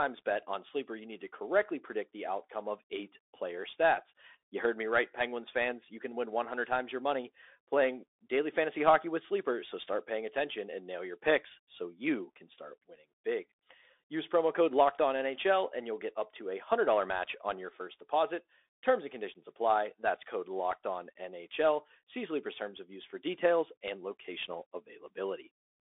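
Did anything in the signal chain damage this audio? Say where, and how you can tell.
Yes, the damage happens at the codec stage: this speech has passed through a Bluetooth CVSD headset codec for its whole length. The band is held to roughly 300 Hz to 3.6 kHz, with nothing above 3.8 kHz, and the coding damage is plainly audible. CVSD sends one bit per sample, signalling only up or down, with an adaptive step size. Fast, loud high content outruns that step and distorts, sibilants turn scratchy, and a granular hiss sits under the speech. All of this fits a 64 kbps CVSD stream.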